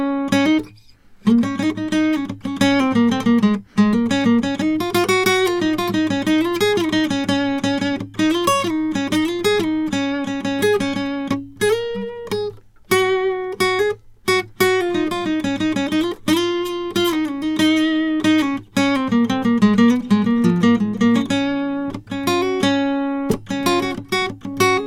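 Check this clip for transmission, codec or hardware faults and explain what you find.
The music comes through with no transmission, codec or hardware faults to report.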